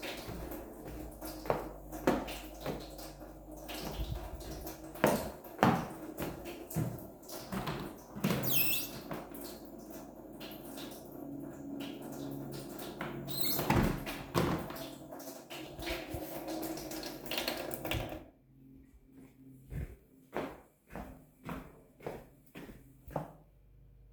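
No technical faults can be heard anywhere in this recording.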